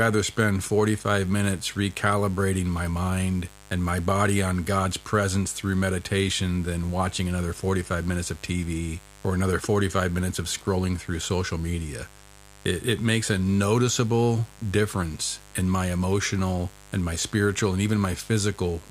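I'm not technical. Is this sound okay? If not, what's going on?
No. A steady, raspy mains buzz runs throughout the speech, caused by electrical interference from the 50 Hz power supply leaking into the recording.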